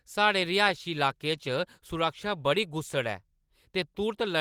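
From 0.68 s to the end, a call bitrate drop starves the Opus encoder, likely from a fallen bandwidth estimate. The speech turns coarse and muffled, consistent with roughly 64 down to 19 kbps.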